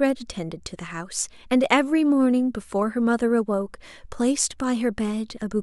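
Speech, with nothing technically wrong with it.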